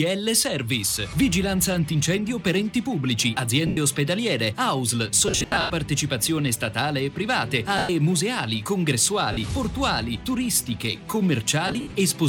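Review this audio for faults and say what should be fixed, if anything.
Lost LE Audio frames at 3.67–3.77 s, 5.28–5.70 s, 7.78–7.89 s, 9.32–9.37 s and 11.68–11.94 s: the LC3 decoder conceals each gap by replaying the last spectrum with scrambled phase, so tonal content turns into a hissy smear that fades after the first few frames. The 5.28 s and 11.68 s stretches are clusters of short losses rather than single gaps. A plain dropout or mute would cut straight to silence. Here the sound keeps a noisy ghost of its last spectrum before decaying. To prevent it, improve the Bluetooth link margin by reducing distance and 2.4 GHz interference, or raise the retransmission count or buffering in the LE Audio stream.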